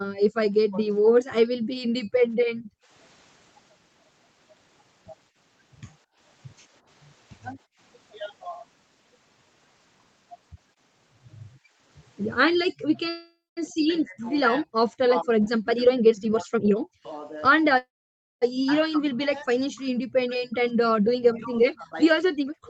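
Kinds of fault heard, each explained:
Background gated by the echo canceller: The room sound behind the talker sinks or vanishes, then returns. This happens from 0.0 to 2.48 s (deepest about 40 dB, roughly half a second affected in total), from 6.04 to 7.79 s (about 27 dB) and from 11.58 to 11.78 s (about 15 dB). The canceller clamps the microphone while the far end plays. Unlike double-talk suppression, it is the ambience that drops, not the talker.
Speech suppressed in double talk: The talker's own sound is pushed down in pieces. This happens from 0.69 to 0.93 s (about 15 dB), from 2.8 to 2.89 s (about 20 dB) and from 12.9 s to the end, where the dips reach about 40 dB. The likely cause is the canceller mistaking the near talker for loudspeaker echo while both sides speak. The talker, not the background, is what gets cut.
Call audio freeze: The sound stalls at 13.09 to 13.59 s and again at 17.78 to 18.44 s. 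The last sound is stretched into a fading buzz or hiss, followed by silence lasting about 0.22 s in the first stall and about 0.55 s in the second. Playback then resumes where it stopped. This likely comes from delayed packets leaving the jitter buffer empty. Unlike a dropout, nothing is lost; gaps of about 0.47 s and 0.64 s are inserted.
Jitter buffer speed-up: From 15.73 to 17.71 s the audio plays about 19% fast, with roughly 0.4 s trimmed out. From 20.27 to 22.57 s it runs about 7% fast, with around 0.15 s removed. The receiver is cutting short pitch-period slices to drain excess buffered delay. The pitch stays put, which separates this from a sample-rate error, where faster playback would also sound higher.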